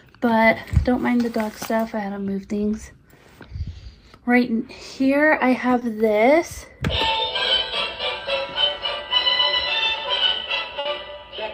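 A short bit of audio with two network dropouts. Around 5.79 to 5.83 s there's a short concealed packet loss: about 20 ms never arrived, so the decoder stretched the previous sound over the hole, leaving a quick smear. Then at 10.79 to 10.87 s comes a burst of packet loss, roughly 60 ms gone, where the receiver holds and fades the last sound before the audio jumps ahead.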